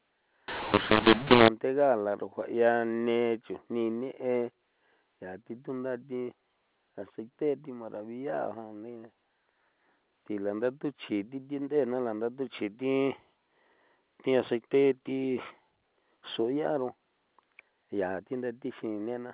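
From 0.48 to 1.48 s the speech turns harsh and gritty, with noise in the gaps: mu-law and A-law mixed up, A-law telephone audio decoded as mu-law.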